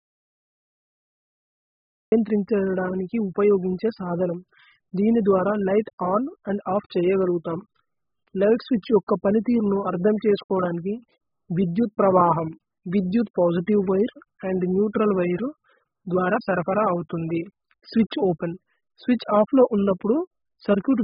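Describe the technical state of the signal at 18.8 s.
At 18.8 s the speech has likely passed through AAC compression at a very low bitrate, which fits a setting near 8 kbps. The encoder has run short of bits, so it cuts the band off and discards detail, and the damage runs through the whole clip rather than only at this moment. Nothing remains above 5.1 kHz, so the speech sounds dull and muffled, and heavy quantisation leaves a smeared, warbling texture with fizzy sibilants.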